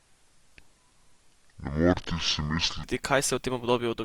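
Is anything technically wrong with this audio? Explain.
Yes, there are two faults in this speech clip.

From the start to 2.84 s there is a section at the wrong speed. It plays at 0.546 times its recorded speed, so pitch and tempo fall together, about ten semitones lower, and the voice sounds deep and dragged out. The likely cause is playback or editing against the wrong clock. On a spectrogram, harmonics and formants in that stretch sit compressed toward the bottom, and the waveform's syllables are visibly stretched.

From 3.75 s to 4.04 s there is zipper noise. The level drops by roughly 20 dB in unsmoothed 2 dB steps, about seven per second, and each jump adds a small click. This is heard as a ticking or zipping on the sound as it fades. The waveform envelope shows a staircase rather than a slope, and the spectrogram shows faint broadband vertical lines at each step.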